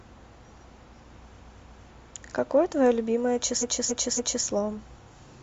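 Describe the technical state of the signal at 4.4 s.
The signal at 4.4 s sits at the tail of a repeated-frames fault running from 3.58 to 4.42 s. A block of roughly 279 ms of compressed audio was delivered more than once, so the decoder plays it again three extra times, which points to a run of about six codec frames. This is heard as a stutter. The repeats lengthen the speech by about 0.84 s.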